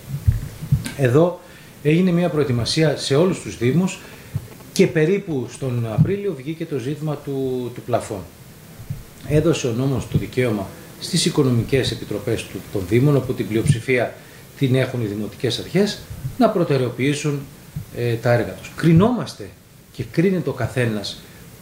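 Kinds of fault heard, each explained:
GSM signalling bursts: A nearby 2G phone is exchanging short groups of radio bursts with the network, and the audio circuit rectifies them. From 4.04 to 6.03 s a galloping dit-dit-dit of buzzes at about 217 Hz sits roughly 20 dB below the sound.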